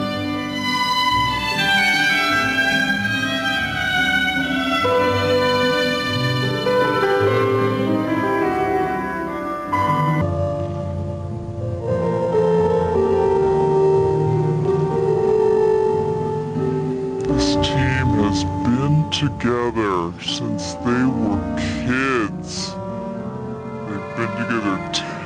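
The whole clip has gain pumping, with a swing of around 10 dB, so everything feels squashed. That's likely input gain set far too high with a fast limiter clamping down on the peaks. From 10.21 s to the end there's a section at the wrong speed. It plays at 0.58 times the original rate, so everything turns slow and drops roughly ten semitones in pitch. The likely cause is that stretch being played back or conformed against the wrong clock.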